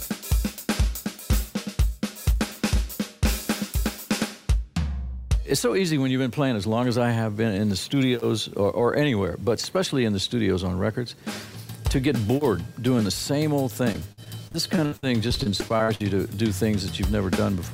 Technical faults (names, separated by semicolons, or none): repeated packet loss (robotic sound)